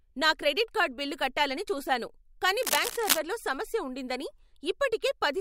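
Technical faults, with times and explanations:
2.63 to 3.19 s, cable scratch noise: right after "బిల్లు కట్టాలని చూసాను కానీ" there's about half a second of dense, ragged scratching and rustling sitting on top of the speech, roughly as loud as the speech itself. It's likely a worn cable or connector being nudged, so the contact resistance jumps around rapidly and sprays those uneven bursts of noise into the signal until it settles again.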